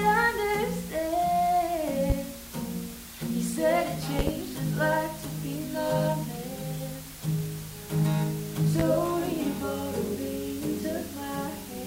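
A steady, even hiss sits under the sound for the whole clip, roughly 15 dB below the signal, with no grittiness or distortion. This is low bit depth with dither, consistent with around 6 bits: dither noise added before rounding turns the coarse quantisation error into constant white noise.

Sharp loud pops punch through at 2.10–2.13 s, as a double pop at 4.19–4.31 s, and at 8.80–8.83 s, each peaking roughly 15 dB above the signal while the sound continues beneath. They are likely voltage spikes from a switch, static or a driver glitch.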